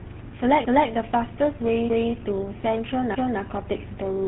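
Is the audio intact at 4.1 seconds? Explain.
No. Tandem speech coding runs throughout: three speech coders in a row each re-encoded the last one's output, leaving rough, muffled, warbly sound with nothing above 3.9 kHz.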